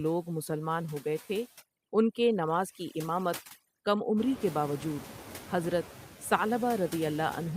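Noise suppressor artifacts run through the whole speech clip. The suppressor estimates which frequency bands hold steady noise and turns them down frame by frame, by about 18 dB here. Between words, the background falls away. When speech starts, the noise comes back up underneath it. The background seems to pump with the talking. This is clearest after about 4 s, where the room noise grows by about 24 dB but stays roughly 17 dB below the speech.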